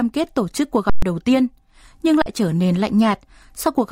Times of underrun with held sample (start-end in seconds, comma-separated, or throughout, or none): 0.90-1.02, 2.22-2.26